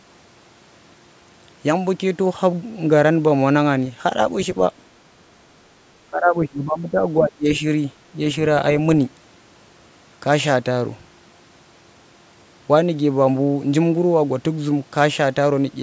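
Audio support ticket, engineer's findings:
Speech suppressed in double talk, 6.08–7.64 s. Echo canceller likely misread near-end speech as loudspeaker echo while both ends talked, then attenuated both. Talker dips by about 15 dB, dulls and drops in fragments for roughly 1.5 s. Call microphone processing audible as expected: content stops at 8 kHz, lowest bass trimmed by its high-pass.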